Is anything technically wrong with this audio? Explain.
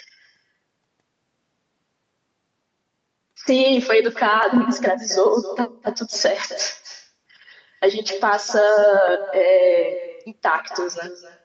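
Yes, two faults. Throughout the speech, every phrase is trailed by a quieter, thinner copy arriving roughly a third of a second later, about 13 dB below the talker. This is echo with no canceller: the far end's loudspeaker fed the microphone, and nothing removed it before the round trip back.

At 4.43 s there is a small jump in the sound, losing only a few milliseconds. The likely cause is a dropped buffer (overrun), where samples were overwritten before being read and the two sides were spliced together.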